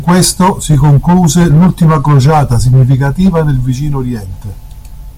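Hard clipping runs through the whole speech clip. The signal reaches the converter or processing stage about 6 dB hotter than it can pass. Every peak above that ceiling is cut flat. Roughly a tenth of the samples sit on the limit. Those flat tops add harmonics high in the spectrum. The result is a harsh, gritty fuzz on each louder syllable. Quieter stretches between peaks sound cleaner.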